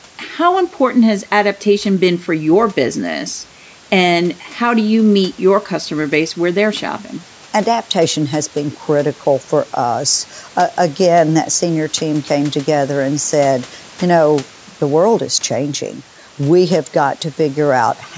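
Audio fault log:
No faults detected.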